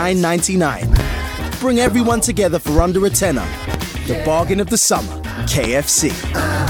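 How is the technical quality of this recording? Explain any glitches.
The recording is marred by a series of loud pops, five events in all. The first, from 0.93 to 1.03 s, is a double pop. Single pops follow at 1.87–1.90 s, 2.78–2.82 s, 3.74–3.78 s and 5.64–5.67 s. Each is a sharp thump that jumps roughly 15 dB above the surrounding level while the sound carries on beneath it. The likely cause is a brief voltage spike, from a switch, static discharge or a driver glitch, entering the signal chain.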